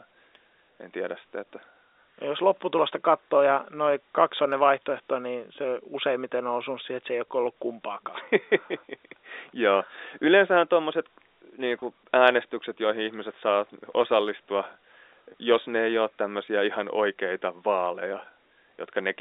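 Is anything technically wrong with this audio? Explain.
Yes. There are two brief dropouts, both packet loss with pitch repetition. The first is at 11.80 to 11.82 s, just after "tuommoiset niin" and before "äänestykset joihin ihmiset saa". The second is at 15.32 to 15.34 s, immediately before "jos ne ei ole". Each gap is 20 ms, which fits a single lost packet. The receiver fills the hole by replaying the last pitch period of the speech, so each one is heard as a very short held, slightly buzzy sustain rather than silence. The telephone band of the G.711 A-law path, 300 Hz to 3.7 kHz, carries through both points.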